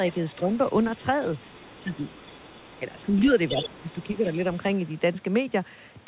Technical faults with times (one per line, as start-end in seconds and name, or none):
0.07-3.16 other side's voice leaking through
0.41-0.51 speech suppressed in double talk
3.06-3.29 speech suppressed in double talk
3.47-4.70 other side's voice leaking through
3.55-3.88 speech suppressed in double talk
4.19-4.26 speech suppressed in double talk